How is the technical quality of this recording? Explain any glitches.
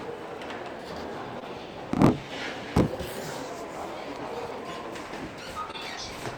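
Two short glitches interrupt the audio, at 1.39 to 1.43 s and 5.71 to 5.75 s. Both are short concealed packet loss. About 20 ms of audio arrived too late, so the receiver stretched the preceding sound over the gap and blended back. Each gap is heard as a brief smear or wobble.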